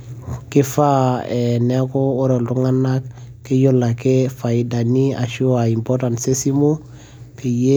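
No audible faults turn up anywhere in the recording; the signal path holds steady throughout.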